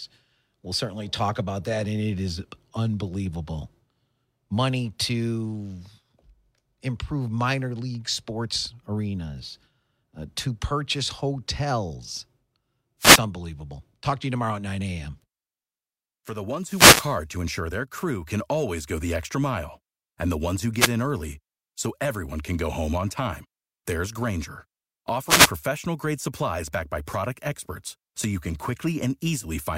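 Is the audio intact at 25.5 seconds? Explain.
No, not quite. At 25.5 s you're catching the tail end of a wireless microphone noise hit that runs from about 25.26 to 25.51 s, roughly a quarter of a second. What's going on is the radio link from an analogue FM mic dipping as reflected signals cancel each other out, so the receiver's own hiss surges up and, at the bottom of the fade, crackles into clicks over the speech. You hear it as a brief swish of static.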